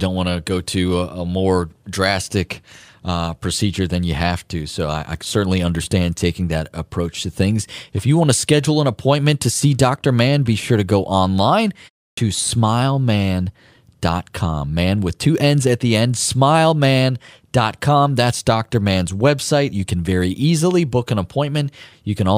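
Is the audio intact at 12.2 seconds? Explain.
No. Just before that point, from 12.13 to 12.17 s, there is a clipped start after a pause: after "sure to go online" and a 0.32 s gap, the output device has dropped into a low-power state and needs time to wake, so about 44 ms of the next sound is swallowed. It bursts in abruptly without its opening. On a waveform it shows as silence ending in a sudden full-level edge, and on a spectrogram as a hard vertical onset with no leading energy.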